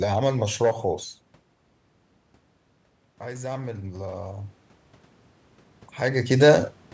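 From 3.21 to 4.47 s, automatic gain rising: the input fell about 11 dB, so the gain control climbed about 7 dB, swelling speech and room noise together.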